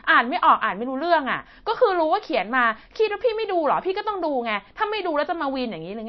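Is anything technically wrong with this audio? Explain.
Yes. Throughout the speech there is plainly audible MP3 compression damage, likely from an encoder running short of bits; it fits a low bitrate around 32 kbps. The encoder removed all treble above a fixed ceiling and dropped weak frequency lines that flicker between frames, so the speech sounds dull, watery and swirly, with metallic chirping on s sounds. A spectrogram shows a hard flat cut-off at about 5.9 kHz and patchy, blinking holes below it.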